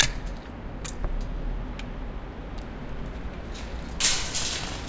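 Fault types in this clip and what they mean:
No faults are present in this recording of sounds.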